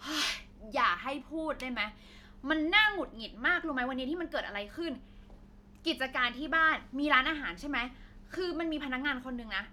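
Nothing in this speech recording stands out as a technical fault, so there's nothing to point to along the way.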